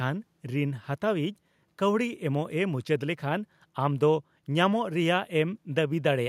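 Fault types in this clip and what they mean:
No faults can be heard.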